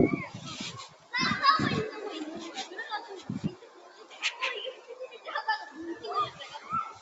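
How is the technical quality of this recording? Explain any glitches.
The quality suffers from a speech-tuned noise suppressor working on everyday sounds. The call microphone path is band-limited, with nothing above 8 kHz.

Throughout, a noise suppressor meant for speech is applied to these sounds. It reads sustained, steady material as noise and pulls it down, then lets it back up on transients, so the level swings by something like 15 dB. You hear pumping and a thin, fluttery texture.

On top of that, there are three spots where sound is cut by the noise suppressor: 0.83 to 1.13 s (about 11 dB down), 3.55 to 4.22 s (about 11 dB), and 4.73 to 5.27 s (about 10 dB). In each, the suppressor decided the held or fading part was noise and ducked it hard. The sound sinks or its tail gets clipped short.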